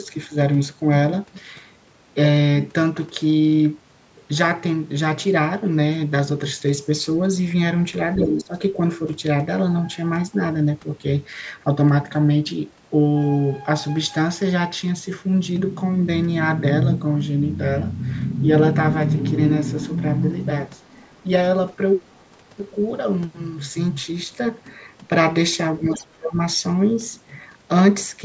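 At 8.16 to 8.54 s the speech dips by about 15 dB, most likely speech suppressed in double talk: the echo canceller, unable to separate the talker from loudspeaker echo while both sides spoke, turned everything down. On the waveform the envelope sags for roughly 0.4 s. Inside that dip, at 8.18 to 8.25 s, a loud scrap of the other side's voice leaking through sits only about 5 dB below the speech, likely echo the canceller left in, visible as a second, unrelated harmonic pattern. Faint leakage recurs at 20.77 to 20.94 s and 22.17 to 22.24 s, about 40 dB down, as barely visible smudges. At 25.79 to 26.37 s a deeper dip of about 25 dB appears, with another echo burst around 25 dB down at 25.94 to 26.05 s, where the spectrogram shows a foreign band pattern under the weakened speech. Throughout, the band stops at 8 kHz, as expected from the call's microphone processing.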